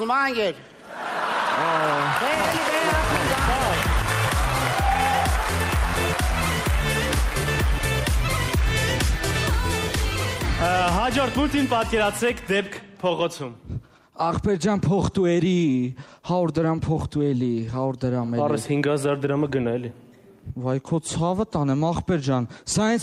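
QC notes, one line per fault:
No technical faults can be heard anywhere in the audio; the signal stays continuous and stable.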